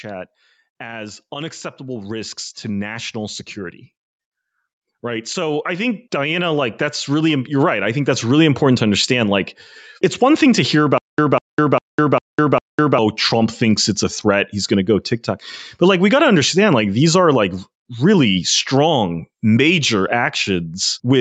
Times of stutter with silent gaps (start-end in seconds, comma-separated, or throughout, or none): 10.98-12.98